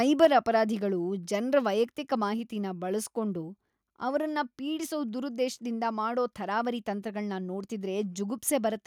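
At 0.22 to 0.26 s the loudest syllable turns harsh and crackly, with its peaks flattened. This points to microphone overload: the input was likely set too high, so the converter clipped the peaks by about 4 dB, touching several percent of samples. Unlike codec distortion, the grit sits only on the loudest moment.

Right at 0.25 s, the speech and the background noise drop together by about 3 dB in a single step. This is the microphone volume being stepped down, likely by the call software reacting to that distorted peak. A gradual fade would ease down, and a noise gate would duck only the quiet gaps, but this level change is instant and then stays put.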